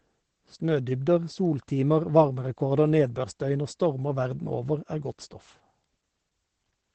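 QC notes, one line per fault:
Throughout: Opus voice compression. The band stops near 8.5 kHz, the wideband limit of the SILK linear-prediction coder, so the speech sounds muffled. Coarse excitation coding adds a hoarse, slightly robotic grain, which fits a bitrate around 12 kbps. Unlike MP3 or AAC damage, there is no swirly, metallic warbling in the highs, because nothing survives up there to warble.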